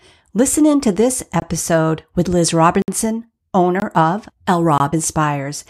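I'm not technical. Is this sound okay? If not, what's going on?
No. The speech briefly cuts out four times, each heard as a small tick or a tiny hole: at 1.40 to 1.42 s, right after "in to this"; at 2.82 to 2.88 s, the longest at 60 ms; at 3.80 to 3.82 s; and at 4.78 to 4.80 s. Each is a block of digital silence, where the program likely didn't deliver sound in time, so a stretch was replaced by pure silence.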